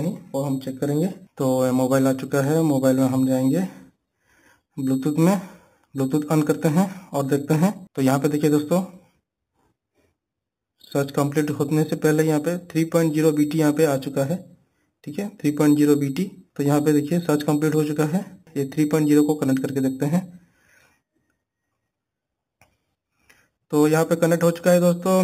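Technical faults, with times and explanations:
Throughout: imaging from sample-and-hold upsampling. Each sample seems simply repeated, with no smoothing filter, which fits an 8 kHz original raised to 48 kHz. Mirror copies of the spectrum sit about 20 dB down, the lowest between 4 and 8 kHz. This gives a bright metallic fizz that tracks the level and moves against the pitch.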